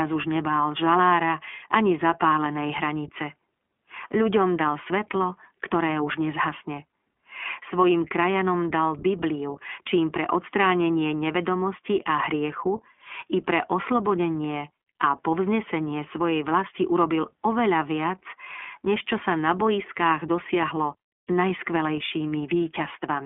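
Throughout the speech, the iLBC codec is plainly audible. Its 20 ms frames are each coded independently, giving a slightly rough, synthetic texture. The line band runs from about 250 Hz to 3.4 kHz, with nothing above 3.6 kHz. The sound points to roughly 15.2 kbps.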